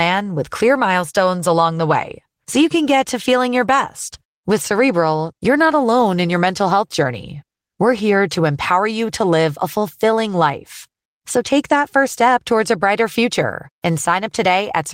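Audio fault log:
No faults are audible anywhere in this speech recording.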